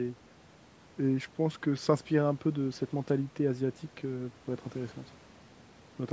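No technical faults can be heard in this speech, which has passed through a call's microphone processing that trims the lowest bass and leaves nothing above 8 kHz, as that processing normally does.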